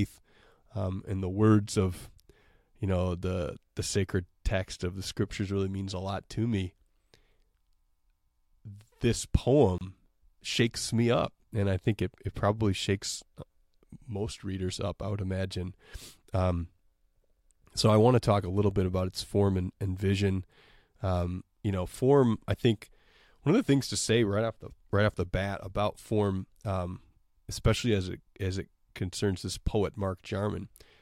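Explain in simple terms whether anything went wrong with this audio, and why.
A gap at a join of encoded pieces appears at 9.78 to 9.81 seconds: the speech suddenly drops out for about 27 milliseconds, then picks up exactly where it left off. The clip was evidently compressed in separate sections and then stuck together without trimming. Each compressed section carries a short stretch of silence at its start and some padding at its end, and that leftover silence shows up as a brief hole at the seam, with blurred edges.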